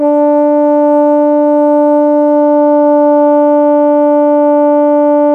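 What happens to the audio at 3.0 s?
At 3.0 s the music is inside a time-stretched section, running from 2.35 s to the end. The pace drops abruptly to about two-thirds speed while the pitch holds. The likely cause is software lengthening the audio by repeating short pieces, which makes it drag.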